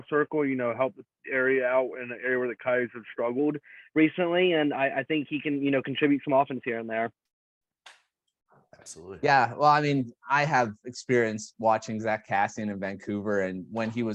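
A wrong sample rate affects the audio from 0.0 to 3.39 s. It runs at about 0.92 speed and 1.47 semitones lower, which fits 48 kHz material played back at 44.1 kHz.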